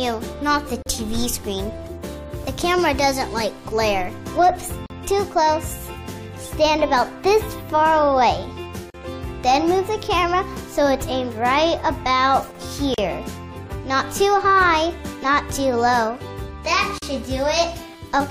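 Gap at a join of encoded pieces, at 0.82, 4.86, 8.90, 12.94 and 16.98 s: the sound drops out for about 40 ms each time (37 ms at the first), recurring every 4.0 s. Separately encoded pieces were joined without trimming, so each piece's leading encoder delay and padded final frame stay in as silence. Each gap opens with edges smeared by the codec, and the sound resumes exactly where it stopped.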